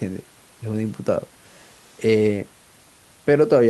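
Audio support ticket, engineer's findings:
No system fault found in the speech clip; the faint room noise, about 35 dB below the speech, is from the recording environment.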